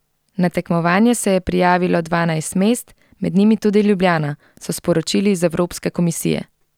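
Nothing technical goes wrong anywhere in this bit of speech, so there's no fault to point to and no cause to chase down.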